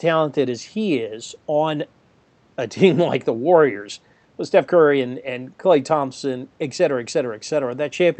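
No faults are audible in the speech; what can be heard is an ordinary call path, with the top end stopping at about 8 kHz and the light coding texture of a mid-rate codec, which fits Opus at around 40 kbps.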